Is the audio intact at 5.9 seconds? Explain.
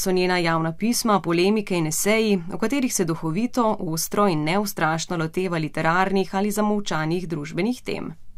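Yes, at 5.9 seconds the speech plays through cleanly, with no audible fault at that moment.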